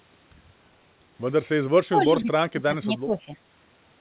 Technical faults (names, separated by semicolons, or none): speech suppressed in double talk